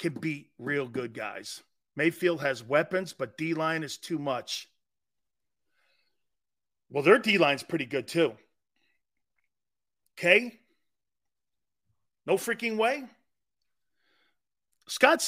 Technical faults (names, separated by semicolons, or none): none